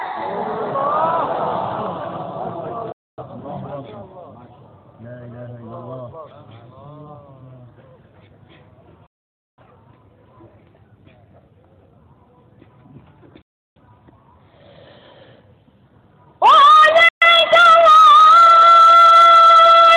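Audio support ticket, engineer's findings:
Digital broadcast dropout. Sound mutes with a fast, roughly 3 ms fade at 2.92 to 3.23 s, 9.06 to 9.63 s, 13.42 to 13.81 s and 17.09 to 17.27 s. Gaps run 128 to 512 ms, which fits whole lost frames. Receiver muting on lost signal or failed checksums. Missing content not recovered.

Dropped buffer (overrun). Jump in the sound at 6.31 s and 16.70 s, no silence. Roughly 15 ms lost at the first, a few milliseconds at the second. Likely capture buffer overwritten before being read, with the two sides spliced directly.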